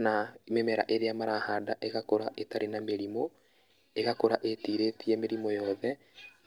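No technical faults are audible anywhere in this speech recording.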